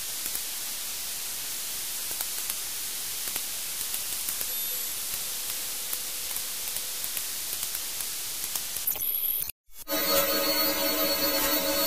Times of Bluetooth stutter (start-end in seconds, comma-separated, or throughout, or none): none